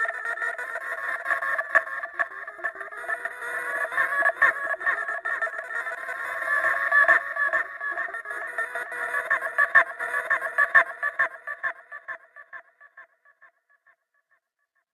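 At about 9.99 s there's a stream segment repeated: the player queued the same chunk twice, so roughly a second of sound replays, with a small blip at the jump back.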